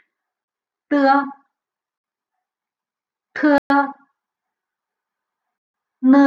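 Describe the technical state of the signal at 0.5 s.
A block of digital silence runs from 0.44 to 0.48 s, ending just before the 0.5 s mark. For 40 ms the sound drops to silence, most likely because the output buffer wasn't filled in time. The signal stops abruptly and resumes with no fade. At this length it comes across as a short, hard hole in the sound, with the signal resuming at 0.48 s.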